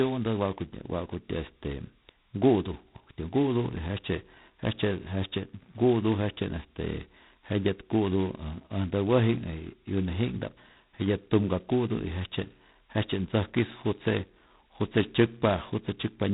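The whole recording carries G.726 ADPCM damage, and it is heavy. The codec sends only the difference between each sample and a running prediction. Here it uses very few bits per sample, which fits the 16 kbit/s mode, about two bits each. That coarse step size leaves a harsh, rasping hiss riding on the speech. The hiss rises and falls with the level of the speech. Nothing passes above 3.9 kHz, so the sound is dull and boxed in.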